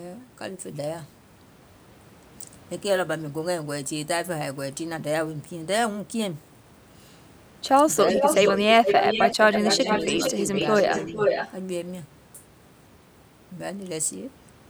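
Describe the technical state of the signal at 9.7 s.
At 9.7 s two faults overlap. The first is speech suppressed in double talk, running from 9.34 to 10.2 s. The voice dips by roughly 10 dB at its deepest, and about half a second of it is turned down. The likely cause is an echo canceller that heard both sides at once. It could not separate the near talker from the loudspeaker return, so it attenuated everything.

The second is an echo leak, from 9.52 to 11.52 s. A copy of the voice returns about 0.45 s late, only a few dB below the direct speech. This likely comes from one side playing the call on a loudspeaker. Its echo canceller did not remove all of the pickup, and the residue was sent back.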